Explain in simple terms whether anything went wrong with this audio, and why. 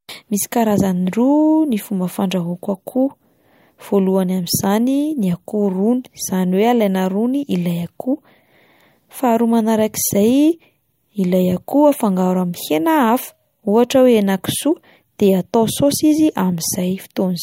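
Nothing went wrong with this recording, and the speech comes across without any technical problem. No working paths are listed to comment on, so there is nothing further to point out.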